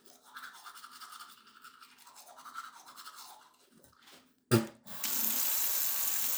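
Nothing in this recording of sounds stands out as a technical fault; it just comes through as it should, with nothing going wrong along the way.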